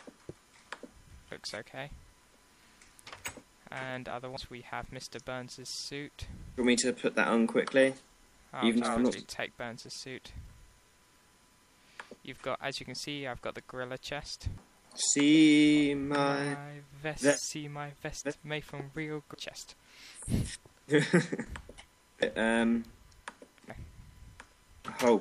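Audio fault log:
4.37, 14.58, 19.34, 22.22–22.26 and 23.70–23.73 s: damaged data in a compressed stream. Corrupt bytes make the decoder misread the affected frames and briefly lose sync until it finds the next valid frame header, giving a short chirp or blip. The first three each last about 4 ms. The last two each last about 32 ms. On a waveform each is an abrupt discontinuity. On a spectrogram it is a thin broadband vertical streak interrupting the surrounding pattern.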